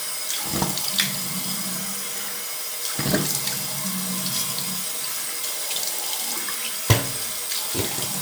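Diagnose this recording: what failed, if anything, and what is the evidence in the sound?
Nothing failed; no stage in the chain shows a fault.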